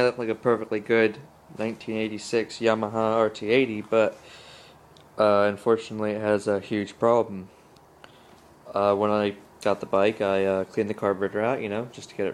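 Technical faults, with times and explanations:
No technical faults are audible anywhere here.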